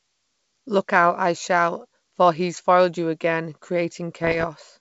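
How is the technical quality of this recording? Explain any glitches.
The speech has one glitch, near the end, on a G.722 wideband channel whose coding fits the 64 kbit/s mode. From 4.22 to 4.47 s, bit errors on an ADPCM link, around half a percent, throw off the decoder's step size and predictor, causing pops and rough, level-jumping bursts.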